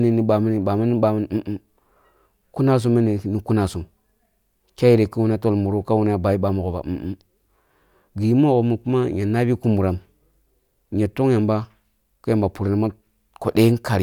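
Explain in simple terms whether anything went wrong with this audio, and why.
Nothing went wrong here: a full listen to the speech recording turns up no technical fault to report.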